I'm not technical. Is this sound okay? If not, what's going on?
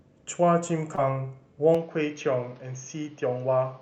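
No. There are two separate problems in this speech clip.

At about 0.95 to 0.99 s there is a short concealed packet loss. Around 20 ms of the audio never arrived in time, and the receiver covered the gap by stretching the sound that came just before it, then blending back into the real audio. What you hear is a tiny smear or wobble, barely a blink, where a short sound may lose its crispness.

From about 1.75 s to the end, the sound changes character: it turns duller and boxy, with nothing above 6.5 kHz, and a faint new background hiss sits underneath. The loudness stays the same and there is no gap at the changeover. This is most likely an input switched to a poorer device, such as another microphone or a headset in call mode, which carries a narrower range of sound.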